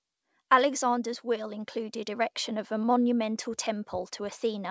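Between 1.25 and 2.77 s the automatic gain control judged the input too quiet and stepped its gain up gradually, an automatic gain rising of about 4 dB. The speech and the background noise swell together, with nothing above 8 kHz throughout.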